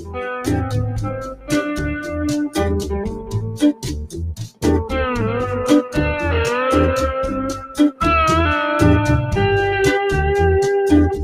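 A noise suppressor applied to music or sounds runs across the whole clip. It was designed for speech, so it treats sustained, steady material as noise and pulls it down. The level swings by around 10 dB, making the sound pump and thin as tails sink.

Sound cut by the noise suppressor occurs at 0.0 to 0.19 s, 0.65 to 1.52 s, 3.08 to 4.21 s, 4.39 to 4.64 s and 7.54 to 8.0 s. In each span the sound dips by about 10 to 14 dB, deepest in the last two. Held portions sag and decays are clipped short while onsets push through.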